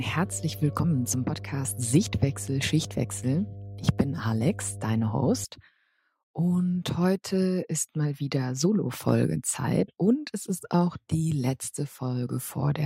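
A steady mains hum sits under the sound from 0.0 to 5.4 s: a low 50 Hz tone, fairly loud at roughly 15 dB below the signal, from power-line coupling via a ground loop or nearby transformer. On a spectrogram it shows as a flat horizontal line at 50 Hz that stops abruptly at 5.4 s.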